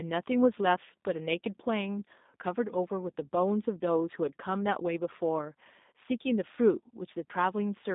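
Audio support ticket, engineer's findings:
G.729 codec damage, whole clip. Speech band-limited to roughly 200 Hz–3.7 kHz, nothing above. Rough, synthetic texture from rebuilding each 10 ms frame from filter, pitch predictor and sparse pulses; sound fits an 8 kbit/s G.729A VoIP leg.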